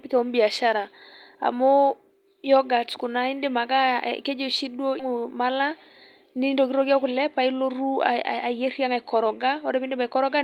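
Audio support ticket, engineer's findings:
Skip ahead at 4.99 s, right after "oshi duo": playback jumps forward with no gap fill, so around a second of speech just isn't there. Probably the jitter buffer overflowed and dumped queued audio, pulling the delay down by roughly that much.

Jitter buffer speed-up, 6.26 to 9.91 s: speech runs about 108% speed at unchanged pitch and sounds a bit rushed. The buffer was over its target, so the receiver kept trimming short pitch-period chunks, around a third of a second in total.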